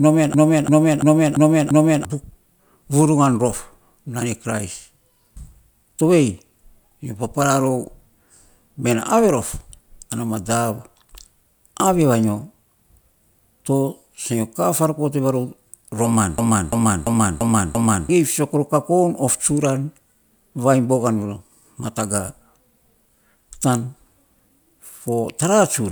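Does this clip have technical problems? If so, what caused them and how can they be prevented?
Yes. From 0.34 to 2.05 s, and again from 16.38 to 18.09 s, the speech stalls into a machine-gun stutter: one 341 ms fragment repeats five times at about 2.9 per second, and about one and a half seconds of audio are lost each time. This is a system hang loop. The computer or driver froze while the sound hardware kept replaying its ring buffer, which fits a 16384-sample buffer. Preventing it means fixing the driver or system stalls that starve the audio thread.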